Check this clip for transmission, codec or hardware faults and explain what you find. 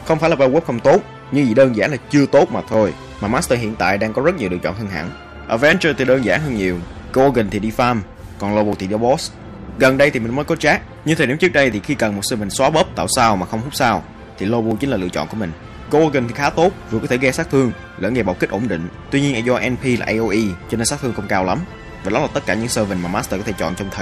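There are four tiny skips, at 2.74, 8.73, 11.72 and 14.71 s, each a few milliseconds of sound lost and spliced shut without silence. Their placement on a 3 s grid points to audio missing between chunks, likely from a recorder dropping samples at each chunk handover.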